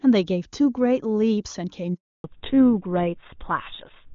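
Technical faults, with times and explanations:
1.94 to 2.24 s, handover gap: the call switched networks and no speech frames arrived for 300 ms, so the sound dies away quickly and stays silent until the new link starts.
2.24 s to end, fallback to narrowband: the call dropped from HD Voice to an older codec, likely GSM full rate. Everything above 4 kHz vanishes, leaving the speech duller and rougher.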